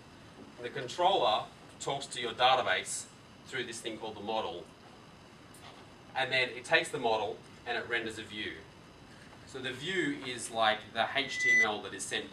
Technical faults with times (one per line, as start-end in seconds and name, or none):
11.19-11.70 loudspeaker feedback squeal